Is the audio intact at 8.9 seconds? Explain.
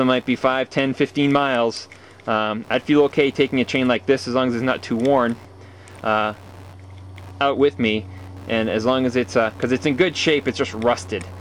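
No. Computer activity noise runs through the whole clip, including 8.9 s. Processor, graphics or mouse load shifts the shared ground of the audio circuit, adding a buzzing, chirping pulse train of roughly 70 pulses per second, about 30 dB below the sound, that tracks the computer's activity rather than the audio.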